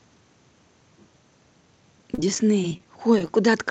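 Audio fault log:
2.14 to 3.30 s repeated packet loss (robotic sound): packets kept dropping, and each brief hole, up to 31 ms, was patched by extending the previous sound, making speech choppy.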